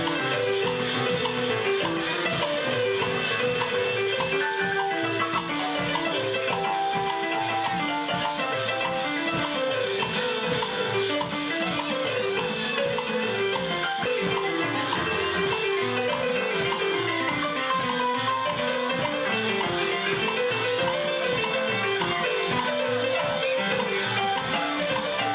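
No technical faults are audible anywhere in this audio.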